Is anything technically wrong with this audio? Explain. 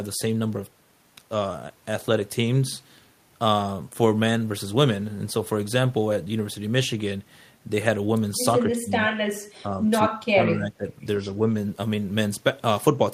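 Yes. The speech dips three times, at 8.59 to 8.93 s, 9.63 to 9.81 s and 10.08 to 10.87 s, with drops of about 20 dB, a few dB, and about 25 dB. These are likely speech suppressed in double talk: an echo canceller that couldn't separate this talker from loudspeaker echo turned both down. Each affected stretch lasts a few hundred milliseconds.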